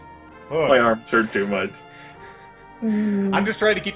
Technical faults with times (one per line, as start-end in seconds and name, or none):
none